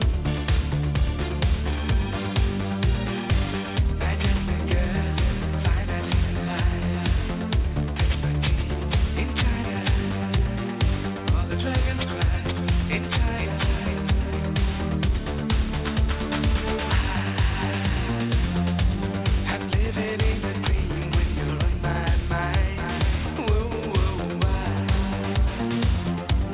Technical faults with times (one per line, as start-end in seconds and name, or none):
0.00-26.54 aliasing